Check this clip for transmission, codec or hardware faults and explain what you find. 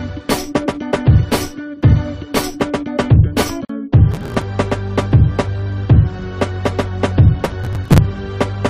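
Two kinds of fault are audible: one gap at a join between encoded pieces and two bursts of processor overload crackle.

Gap at a join of encoded pieces, 3.65 to 3.69 s: a silence of about 45 ms cuts into the continuous sound, which then resumes where it left off. Separately encoded pieces, apparently 6 s long, were joined without trimming the encoder's start delay and end-frame padding. A spectrogram shows a thin blank vertical stripe with slightly smeared edges.

Processor overload crackle, 4.11 to 4.42 s and 7.45 to 7.98 s: a gritty, tearing crackle rides over the sound. The processor missed a run of buffer deadlines, which fits buffers of a few milliseconds, and each late buffer was skipped. The waveform shows dense tiny dropouts and hard steps, and the spectrogram shows clusters of broadband vertical streaks.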